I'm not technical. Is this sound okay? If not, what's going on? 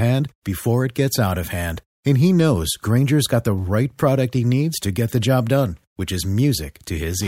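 Yes, this sound is okay, with nothing going wrong anywhere in the recording. The speech comes through steadily without any breaks, jumps or interruptions to listen out for.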